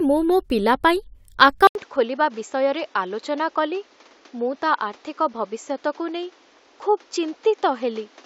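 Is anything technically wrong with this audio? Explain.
Yes. At 1.67 s there's an 80 ms gap, then the speech goes dull to the end: nothing above 7.6 kHz, roughly 5 dB quieter, new background noise about 30 dB down. That's likely the input switched to a poorer device, a narrower-band mic with its own tone and noise floor.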